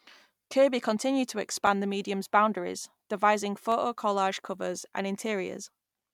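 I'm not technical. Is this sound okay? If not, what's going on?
No. There are two blocks of digital silence, at 1.67 s, between "continued to" and "the medium's boundaries devising", and at 3.72 s, just after "the medium's boundaries devising". In each, the sound drops instantly to nothing and snaps back, so you hear a quick tick. The first gap lasts about 3 ms, which fits a 128-sample block the playback software failed to fill in time.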